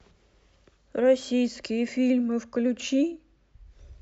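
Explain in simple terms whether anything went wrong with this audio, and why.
Nothing went wrong with this audio, because no fault can be heard anywhere in it.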